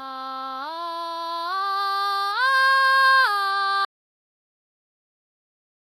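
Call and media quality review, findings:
Audio dropout to silence, 3.85 s to end. Music cuts off abruptly mid-flow; remaining 2 s is silent, no room tone. Waveform flatlines, spectrogram goes fully blank. Likely input loss (device disconnect, link failure or mute) while recorder kept writing silence.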